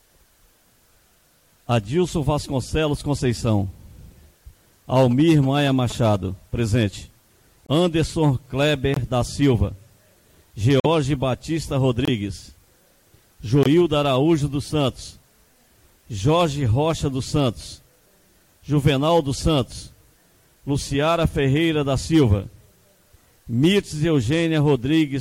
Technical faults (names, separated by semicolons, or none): GSM signalling bursts; corrupt frame muted